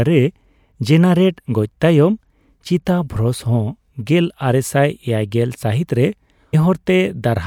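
Speech recording with a stream segment skipped at about 6.53 s, likely because one segment of the segmented stream failed to load and the player moved straight on to the next. The sound jumps abruptly forward there, with a brief blip at the join.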